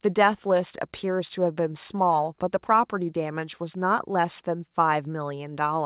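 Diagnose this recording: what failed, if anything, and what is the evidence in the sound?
Nothing in this speech recording has failed. It came through a WebRTC call path working as intended, and the band stops at 4 kHz, which fits a narrowband telephone codec such as G.711 A-law at 64 kbps.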